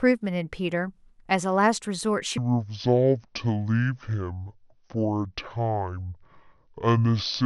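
From 2.38 s to the end of the speech at 7.45 s, the audio abruptly turns deep and sluggish, dropping roughly ten semitones as everything stretches out. This is a section at the wrong speed, running at 0.554 times its original rate, so pitch and tempo fall together rather than independently. The sudden onset mid-clip most likely comes from that stretch being played or edited against the wrong clock.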